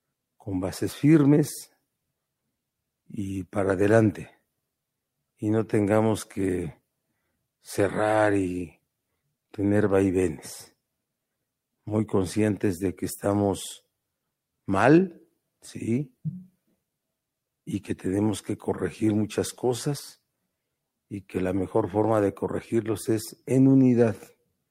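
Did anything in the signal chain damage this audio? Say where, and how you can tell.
No, nothing in the signal chain damaged this audio.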